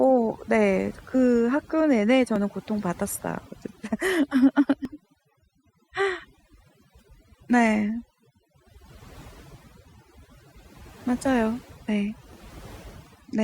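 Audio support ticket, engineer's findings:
Overdone noise removal across the whole clip: background pulled down and breaking up into twinkling specks. Suppressor set too aggressive, pulling individual frequency bands down or out wherever they approach its noise estimate, taking quiet voice detail with them.

Short skips at 2.36, 4.85, 7.35 and 12.33 s, each a few milliseconds of missing audio, sides butted together without silence. Spacing of about 2.5 s points to audio missing between chunks, likely lost at each chunk handover in capture or processing.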